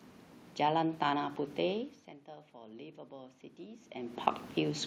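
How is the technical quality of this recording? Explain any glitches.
One glitch stands out: automatic gain rising, from 2.26 to 4.32 s. After the input fell by about 17 dB, the gain control judged the signal too quiet and slowly added about 6 dB, so the voice and the room noise behind it swell up together over those two seconds.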